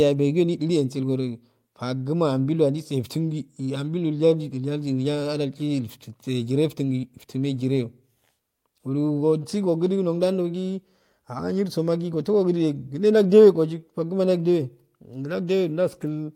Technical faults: none

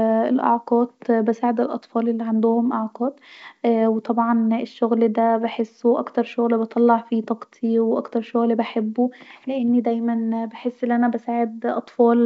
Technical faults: none

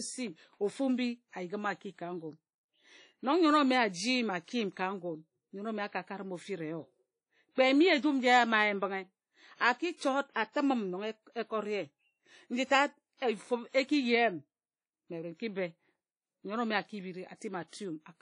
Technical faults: WMA compression; pre-echo

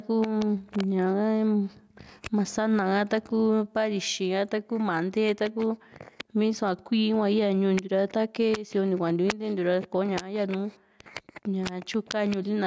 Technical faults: gain pumping

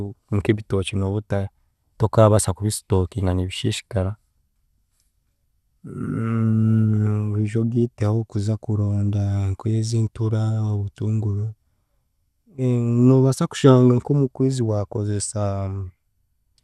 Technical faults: MP2 compression

